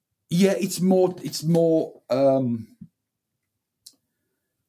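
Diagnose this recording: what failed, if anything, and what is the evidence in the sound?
Nothing in the signal chain audibly fails: the level stays steady, the sound runs continuously without gaps, and no stage from capture to playback leaves an audible trace of a fault.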